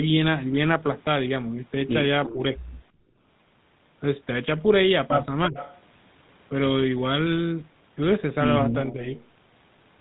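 GSM full-rate coding runs through the whole speech clip. The codec rebuilds the voice from a vocal-tract model fed by a sparse, regularly spaced pulse excitation, so every syllable carries a buzzy, gravelly grain. The band is shut off above 4 kHz, which leaves consonants dull. The damage is plainly audible and fits the 13 kbps full-rate codec rather than a later GSM variant.

Echo leak, 2.25 to 2.33 s: a copy of the far side's voice surfaces about 340 ms behind the original, at about 10 dB below the speech. The likely cause is a loudspeaker-side echo canceller that failed to remove everything its microphone caught and returned the remainder down the line.

Speech suppressed in double talk, 2.33 to 2.4 s: directly after that echo, the talker dips by roughly 5 dB for about 70 ms, a brief softening rather than a cut. Both sides were likely speaking at once, and the canceller, unable to separate its own talker from loudspeaker echo, pulled the whole signal down.

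Background gated by the echo canceller, 2.92 to 3.2 s: the room sound drops by about 17 dB for around 300 ms and then returns. The canceller clamped the microphone hard while the loudspeaker played and released it afterwards.

Speech suppressed in double talk, 5.48 to 5.57 s: a much deeper hole of roughly 20 dB, lasting about 100 ms, nearly cuts the talker out. The same overlap of both voices is the likely trigger.

Echo leak, 5.56 to 5.81 s and 9.18 to 9.26 s: the 340 ms delayed copy returns. It is about 15 dB down and a quarter-second long in the first case, and a brief scrap about 25 dB down in the second. In both, the residual likely comes from incomplete cancellation at the loudspeaker end.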